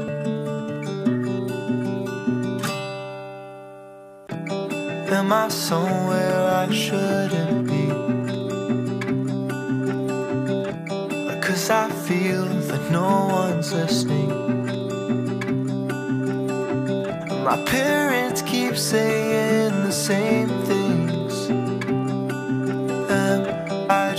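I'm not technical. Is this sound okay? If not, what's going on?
Yes, this sound is okay, and nothing is going wrong with it.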